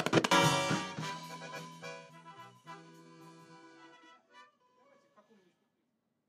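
No technical faults can be heard in this recording.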